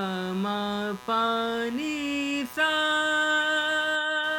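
From the start of the clip to its end, computer activity noise sits under the sound: a buzzing, scratchy layer pulsing at around 150 times a second, roughly 20 dB below the wanted audio. It rises and falls with the computer's workload rather than with anything in the recording. Changing current draw from the processor, graphics card or mouse shifts the ground that the audio circuit shares with them, and that movement leaks straight into the signal.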